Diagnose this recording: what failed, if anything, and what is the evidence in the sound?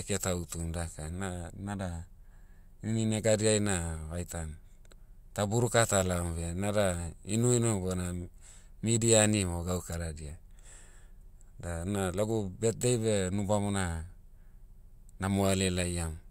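Nothing in the recording points to a failure anywhere in the chain from capture to playback, and the speech signal comes through intact and continuous.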